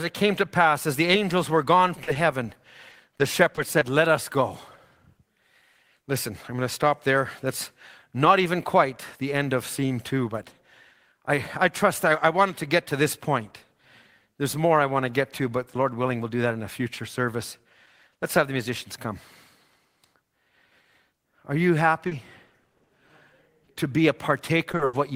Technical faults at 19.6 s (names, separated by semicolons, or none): none